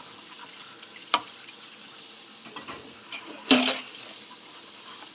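No technical faults can be heard in this sound, which carries nothing above 4 kHz, a narrow band that points to a call path using a telephone-grade codec such as G.711 mu-law.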